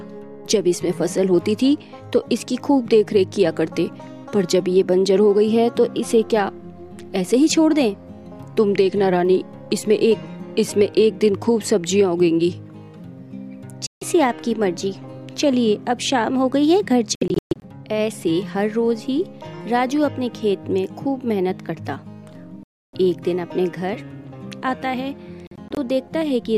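The sound cuts to silence at 13.87–14.03 s, in broken bursts from 17.15 to 17.63 s, solidly at 22.63–22.94 s, and in short stutters at 25.47–25.78 s. That's likely a Bluetooth dropout: late packets got discarded, and playback picks up as though it never paused.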